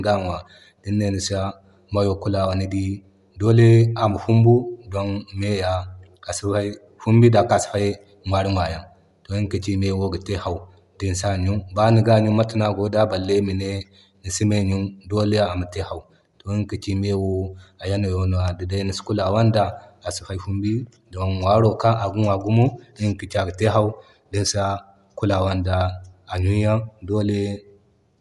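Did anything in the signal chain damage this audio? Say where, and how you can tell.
Yes, at the codec stage, throughout the clip: Bluetooth LC3 compression is the likely cause. The speech has a plainly audible grainy, breathy edge and nothing above 11.6 kHz. Unlike a plain low-pass, the damage is consistent with 10 ms transform frames at 48 kbps.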